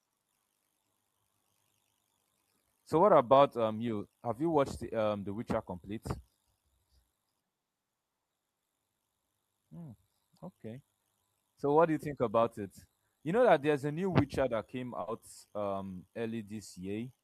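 At 15.01 s, right after "that came", a burst of packet loss interrupts the speech for about 80 ms, until 15.09 s. The receiver bridges the gap by stretching the last sound it received and letting it fade, so the speech smears into a brief held, fading sound before jumping ahead with about 60 ms of the original missing. Unlike a plain dropout, the gap is never fully silent, and unlike a click, it lasts long enough to be heard as a sustained sound.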